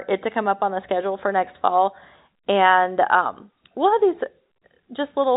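The speech arrives through G.711 telephone coding with nothing above about 3.8 kHz and only the faint, level-following quantisation noise that this format carries, and there are no technical faults to report.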